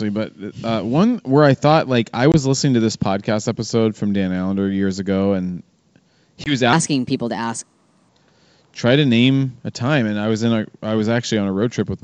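At 2.32 to 2.36 s, between "I thought like I" and "listening to this podcast", and again at 6.44 to 6.56 s, packet loss on an ADPCM call leaves about 20 ms of silence each time, consistent with one lost packet. The waveform shows a flat-edged gap and the spectrogram a sharp vertical blank. Then the speech resumes slightly distorted while the decoder's predictor resynchronises.

From 6.73 to 8.09 s, a section at the wrong speed plays 1.22 times fast. Pitch rises about three semitones, so harmonics shift upward and syllables compress. This is likely from playback on a mismatched clock.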